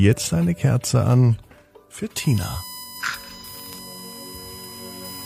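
The audio carries a USB whine from 2.16 s to the end. It is a fixed-pitch tone built on 1 kHz, with its strongest component at the 5 kHz harmonic, around 15 dB below the signal. The bus draws current in 1 ms frames, and that ripple leaks in through shared power or ground. Between 3.01 and 3.44 s there is AAC frame loss with concealment. About 128 ms of audio is missing, scattered over roughly 340 ms, which points to a few lost frames. The longest gap is about 40 ms. The decoder patches each gap from the last good spectrum, so these spots sound smeared, noisy or phasey rather than dropping to silence.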